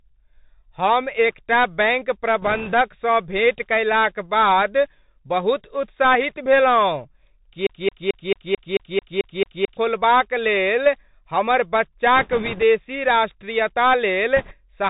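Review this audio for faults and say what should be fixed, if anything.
Bluetooth CVSD headset codec, present throughout the speech: nothing above 4 kHz survives, so the sound is narrow and boxy. With one bit per sample saying only up or down, the adaptive step cannot keep up with loud, fast-rising sounds, which smear and distort. Sibilants turn scratchy over a steady granular hiss, all of which fits a 64 kbit/s CVSD link. The fix is a wideband headset profile such as mSBC or LC3 instead of CVSD.

Bits are flipped on the Bluetooth voice link from 2.42 to 2.74 s, 12.16 to 12.63 s and 14.37 to 14.56 s. Each flipped bit nudges the waveform by only one small step, and the decoder's adaptation pulls it back, so there are no sharp clicks. Instead there is a rushing, crackly noise laid over the speech. The noise is thicker in the later two stretches, where the error rate, a few percent, runs slightly higher. 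Better radio conditions, with the headset closer to the host and less 2.4 GHz interference, would keep those bits clean.

A broken-record loop runs from 7.67 to 9.77 s. A 220 ms fragment repeats exactly, back to back, ten times, and the speech that belonged in those two seconds is gone. The likely cause is the player, encoder or stream stalling and resending the last buffer it held. Watchdog handling that outputs silence or resynchronises on a stall, rather than replaying stale data, would prevent it.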